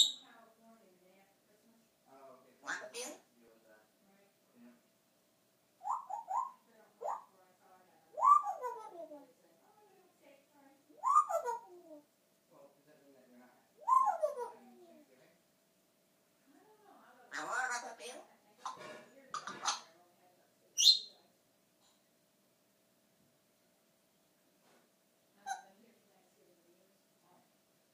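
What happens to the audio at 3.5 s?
At 3.48 s there is an overlap between stream segments. Overlapping time stamps make the player trim about 11 ms of real sound. The waveform jumps, heard as a tiny skip.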